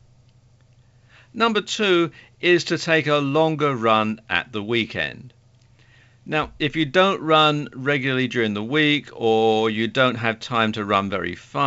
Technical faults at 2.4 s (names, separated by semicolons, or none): none